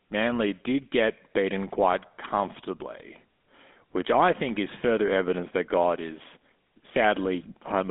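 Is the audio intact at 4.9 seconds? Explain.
No. At 4.9 seconds, as throughout the clip, the speech has a buzzy, gravelly roughness and a narrow band of about 250 Hz to 3.6 kHz. This is GSM full-rate codec damage: the coder models the vocal tract and drives it with sparse, regularly spaced pulses, consistent with a 13 kbps stream.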